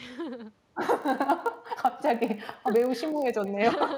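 A far-end loudspeaker is feeding the talker's own audio back into its microphone with no echo canceller to remove it, so throughout this speech clip every phrase is trailed by a second copy arriving about a fifth of a second later. That returned copy sits about 21 dB below the direct speech and sounds thinner, a faint shadow that follows each syllable rather than blending with it.

From 1.02 s to 3.51 s a processing filter is restarted on every block: its stored state is thrown away and each block begins from silence. Every block boundary therefore produces a small transient. Together these transients form a buzz at 50 Hz, which points to blocks of roughly 20 ms. The buzz grows louder and softer with the speech level, sitting underneath the talker for that stretch before stopping.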